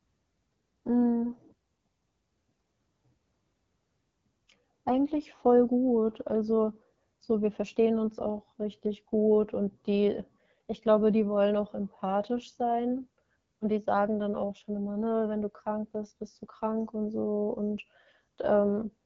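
AMR wideband (HD Voice) codec damage runs throughout: raspy, rough speech from the model-based coding points to a low mode near 8.85 kbit/s, with nothing above 7.6 kHz.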